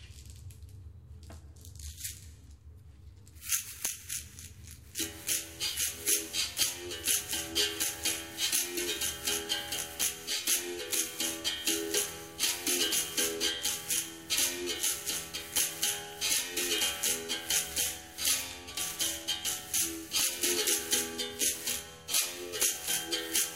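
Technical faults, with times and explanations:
3.85, 6.63, 8.55, 10.02, 10.94, 15.58, 20.20 and 22.63 s, integer overflow: at each of these loud peaks, pushing the level past the top of the integer range by at most about 2 dB, the value wraps to the opposite extreme instead of being held at the limit. The sample jumps across the full range, producing a violent, instantaneous crack. Clipping flattens the peak into a buzzy harshness, but this is a single sharp snap.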